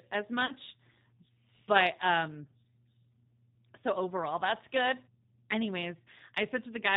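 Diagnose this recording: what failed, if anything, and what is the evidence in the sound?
The speech passed through a G.729 codec at 8 kbit/s, which rebuilds each 10 ms frame from a vocal tract filter, a pitch predictor and a few pulses. The damage is plainly audible across the clip: nothing above 4 kHz, and a rough, slightly synthetic edge on every syllable.

On the network side, speech data went missing, and the decoder's packet loss concealment filled the hole. From 0.46 to 0.52 s it extends its last pitch and filter state, covering a 30 ms gap that fits a single lost packet. This leaves a brief smeared patch, and the voice stays weak or distorted for a short while after normal decoding takes over again.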